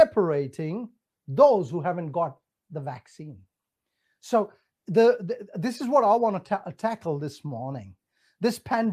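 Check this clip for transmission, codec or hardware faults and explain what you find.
No faults turn up anywhere in this speech recording. There is nothing here to flag or explain.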